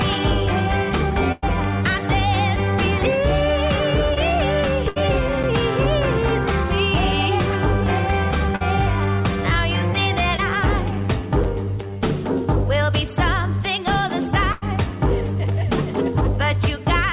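At 1.32 s the sound smears into a held, fading tail for about 0.12 s before resuming further on. This is a burst of packet loss: roughly 100 ms never arrived, so the receiver stretched the last sound and faded it. The same happens at 4.89 s (about 80 ms lost), 8.56 s (about 40 ms) and 14.52 s (about 100 ms).

At 4.14 s and again at 10.36 s there is a brief smear or wobble lasting a few hundredths of a second. These are short concealed packet losses, each about 20 ms, patched by continuing the preceding sound and blending back in.

At 11.44 s a tiny hole of about 7 ms interrupts the sound with nothing lost. It is a gap between chunks, consistent with audio handled in 6-second pieces, heard through a G.711 call path with nothing above 4 kHz.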